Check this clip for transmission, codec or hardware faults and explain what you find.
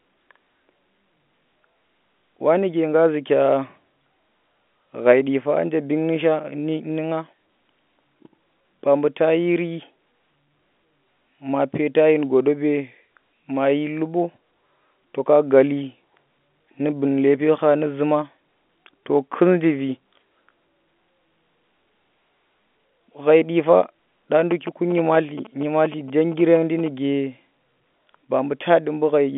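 No transmission, codec or hardware problems are audible here.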